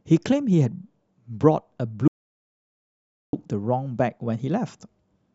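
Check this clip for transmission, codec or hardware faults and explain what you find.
There is one fault in this speech clip, an audio dropout to silence. From 2.08 s to 3.33 s the sound cuts out completely. About 1.25 s of speech is lost. The gap is silent with no room tone. The input was likely lost while recording carried on.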